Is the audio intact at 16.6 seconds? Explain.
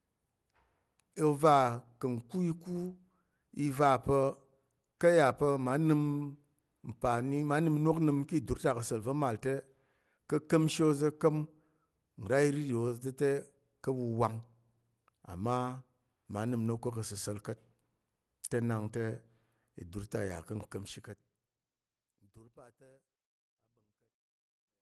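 Yes, the audio is intact at 16.6 seconds, with no fault at that moment.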